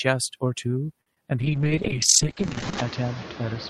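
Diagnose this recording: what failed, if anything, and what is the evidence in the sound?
The call-processing noise suppressor is working hard across the whole clip, pulling steady noise down by about 17 dB. You can hear the background sink in the gaps and come back up under the speech. It gets more obvious after the room noise jumps by about 16 dB around two and a half seconds in, because the suppressor then has much more to chew on frame by frame.

At 1.01 to 1.07 s there's a short stall from a late packet, a network and jitter-buffer issue. A packet didn't show up on time, the buffer ran dry, and the receiver held the last sound for about 50 ms until it arrived. Nothing is actually lost. You just hear a sound hang a touch too long, and the playout delay steps up by about 50 ms.

Right after that, at 1.14 to 1.17 s, there's a short concealed packet loss, also on the network side. About 10 ms of audio never made it, and the decoder papered over roughly 18 ms by extending what came before and cross-fading back into real audio. 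It comes across as a tiny smear or wobble rather than a clean gap.

From 1.41 s to the end there's a call bitrate drop, where the codec was throttled after the bandwidth estimate fell. The sound goes rough and watery, and the top end collapses from about 20 kHz down to about 8 kHz, which fits Opus falling from around 48 kbps to around 6 kbps. It sits at its worst for about 1.4 s and stays muffled through the close.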